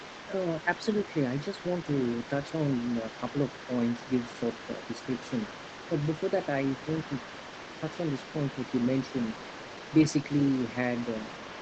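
The echo canceller on the talker's end has likely failed to strip out the far-end audio that its loudspeaker plays into the microphone, so the other side's voice is leaking through for the whole clip, from 0.0 s to the end. That second voice sits well beneath the main talker, somewhere around 15 dB quieter, and carries on as a faint layer behind the speech. Like the rest of the call audio, it is limited to frequencies below 8 kHz.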